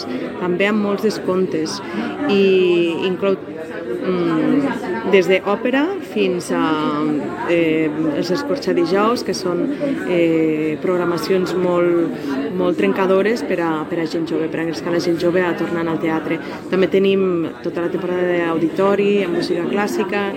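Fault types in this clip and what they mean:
There are no fault types in this clip.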